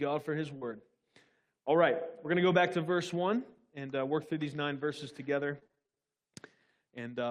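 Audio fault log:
0.57–0.63 s, short concealed packet loss: right after "for his" the sound briefly smears and wobbles. About 40 ms of audio never arrived in time, so the receiver stretched the preceding sound across the hole and then faded back into the real signal.
5.59–6.00 s, repeated packet loss (robotic sound): after "these nine verses together" the sound turns choppy. Ten separate gaps, the longest 24 ms, were each patched by continuing the last sound, leaving roughly half of this stretch synthesised rather than received.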